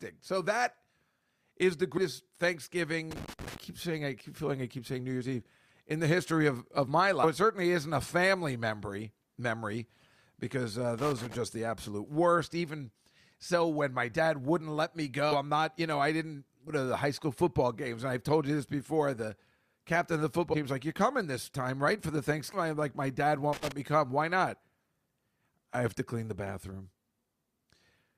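Compressed frames are skipped at 1.97–2.00 s, 7.23–7.26 s, 15.31–15.36 s, 16.67–16.74 s, 20.53–20.58 s and 22.53–22.56 s. The decoder drops whole frames and the speech jumps ahead, anywhere from under a tenth of a second to nearly half a second. Each jump fits whole 20 ms frames.

Loose connector crackle comes in at 3.11–3.58 s, 10.98–11.35 s and 23.53–23.72 s. A bad contact keeps cutting in and out, chopping the signal into irregular bursts of scratchy crackle.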